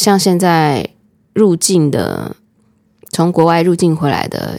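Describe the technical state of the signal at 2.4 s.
At 2.4 s the speech signal is intact, with no audible fault at that moment.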